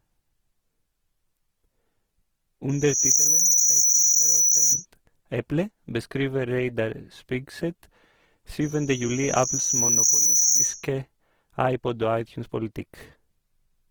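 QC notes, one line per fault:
throughout: Opus compression. The speech was likely squeezed through Opus in its music-oriented mode at a rate that fits about 16 kbps. With too few bits to code each band properly, the encoder keeps each band's overall energy but fills in detail by folding lower bands or injecting noise. The full bandwidth survives, but the voice comes out grainy and rough, with a noisy, hashed texture that is plainly audible.
2.70–4.86 and 8.61–10.87: loudspeaker feedback squeal. A microphone picked up the loudspeaker it was feeding, and at 5.9 kHz the loop gain rose above one, so that single frequency reinforced itself on each pass until it reached about 10 dB above the speech. The first squeal rises quickly, in under half a second, and cuts off just before "eple beskriver". The second swells more gradually, over about a second and a half, into the same piercing whistle.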